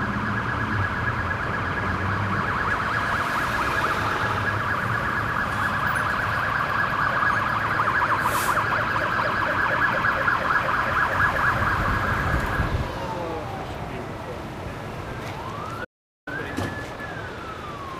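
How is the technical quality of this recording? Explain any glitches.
One glitch stands out: a playback stall from 15.84 to 16.28 s. The sound cuts off mid-flow into complete silence for about 0.42 s, then resumes. The likely cause is the player running out of buffered data or its thread being blocked. Unlike a brief dropout click, the gap is a sustained stop long enough to register as a pause.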